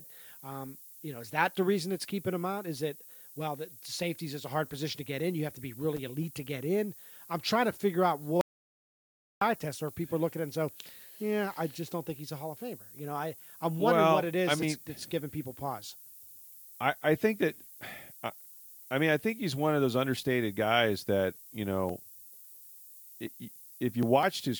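A steady, thin hiss sits under the speech for the whole clip, tilted hard toward the top of the band and only about 20 dB below the speech itself. This is low bit depth with noise shaping. The audio is carried on very few bits, which fits roughly an 8-bit word. The rounding error from that coarse quantisation has been fed back and pushed upward in frequency, so it lands as bright, constant high-frequency hiss rather than as broadband grit.

At 5.96 to 5.99 s, between "have to be" and "elite to get in", a brief burst of scratchy crackle breaks through. This is loose connector crackle. A worn or dirty contact in the signal path is rapidly making and breaking, and the signal is chopped into fragments for those few tens of milliseconds. The result is an irregular, rough spray of clicks rather than a single clean pop.

From 8.41 to 9.41 s, right after "trying to figure out", the sound cuts off completely for about one second and resumes mid-flow at "eye test or people". 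This is an audio dropout to silence. The gap is silent with no room tone, and whatever was said in that second is gone. The likely cause is the audio input being lost briefly while the recording carried on writing silence.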